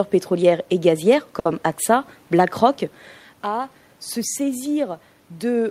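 Speech, with a short stall from a late packet at 1.39 to 1.48 s, just after "pétrolières et gazières". The jitter buffer ran dry, so the receiver held the last sound for about 60 ms, then resumed without losing anything. On a spectrogram the harmonics run flat and smeared through that gap.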